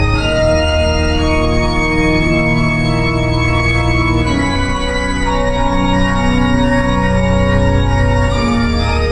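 Nothing in this bit of music gives away any technical trouble, so there's no fault to point to anywhere along the way.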